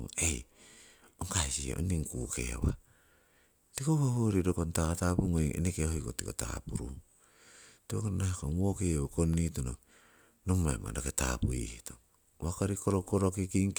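Speech with CD scratch ticks between 8.58 and 9.59 s: five ticks, the longest about a millisecond, once per disc rotation where a scratch defeats error correction, showing as thin vertical spectrogram lines.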